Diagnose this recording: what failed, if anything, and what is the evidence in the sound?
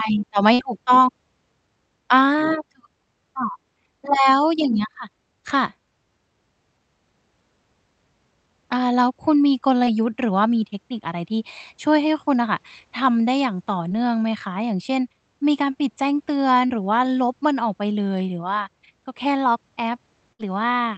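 Network packet loss on the call path, in two forms. The first is a burst of packet loss at 0.53–0.61 s and again at 20.33–20.41 s, each losing about 60 ms of speech. The receiver stretched the last sound across the hole for roughly 53 ms and 64 ms, fading it out, so you hear a held buzz or decaying hiss before speech resumes further along. On a spectrogram this appears as frozen, smeared harmonics dimming into a gap, then an abrupt restart.

The second form is short concealed packet loss at 9.85–9.89 s, 13.89–13.92 s and 16.66–16.83 s. About 20, 20 and 40 ms never arrived, and the decoder patched them with 20, 17 and 32 ms of extrapolated audio. The last event also adds around 10 ms of timing slip. Each is heard as a brief smear or wobble in the speech. On a waveform it shows as a short, overly regular stretch, and on a spectrogram as blurred harmonics, all set within Opus audio that tops out at 8 kHz.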